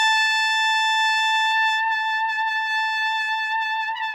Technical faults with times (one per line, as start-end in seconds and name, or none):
0.00-4.15 crude rate conversion